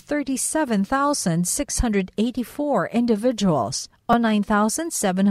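At 1.52 s there's a repeated buffer, where the next chunk of audio didn't reach the device in time, so it played the last one again. The piece is only about 5.33 ms long, which fits a 256-sample buffer, so you don't hear a stutter. You hear a tiny click from the hard joins. At 4.13 s the same thing happens with two extra plays, giving a slightly longer buzzy tick in the speech. No audio seems to go missing either time.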